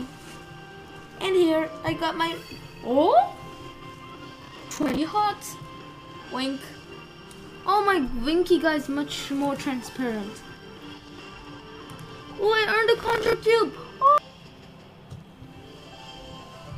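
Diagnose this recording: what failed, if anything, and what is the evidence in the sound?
Processor overload crackle at 4.41–4.98 s and 12.98–13.33 s: the buffer stage misses dozens of short, roughly 10 ms deadlines, replaying stale audio as gritty tearing.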